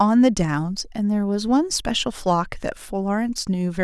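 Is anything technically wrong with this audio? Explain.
No, nothing is technically wrong with this audio.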